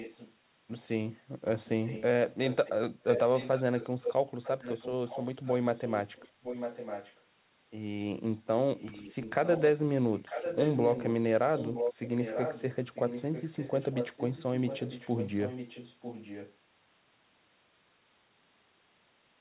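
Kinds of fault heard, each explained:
Echo leak: a copy of the speech returns about 0.95 s late, in bursts from the start to about 16.5 s. It is faint at first, roughly as loud as the talker around 3.1 to 4.1 s, and then somewhat quieter, including the long stretch from 9.9 to 16.55 s. The likely cause is a loudspeaker-side echo canceller passing its microphone pickup back. A spectrogram shows the harmonic patterns repeated about 0.95 s to the right, below 4 kHz. The waveform shows overlapping, doubled envelopes.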